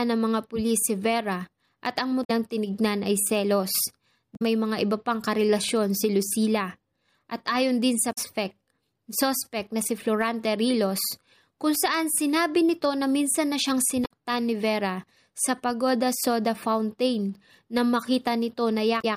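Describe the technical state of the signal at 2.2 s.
Right around there, between "at ang" and "tinignan ay selos", there's damaged data in the compressed stream from about 2.24 to 2.31 s. Corrupted bytes threw the decoder off its frame sync while it hunted for the next valid header, so you get a quick glitch: a chirp, squawk, click or short hole.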